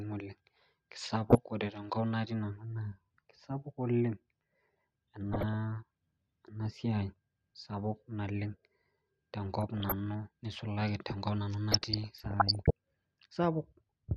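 Over the speech there's DAB burbling at 1.27–1.38 s, 5.33–5.54 s, 9.62–9.92 s and 11.72–12.71 s. Weak reception lets bit errors slip past correction into the MP2 data, so individual sub-bands get short blips of noise or jump in level for up to a frame, giving a burbling that's longest near the end.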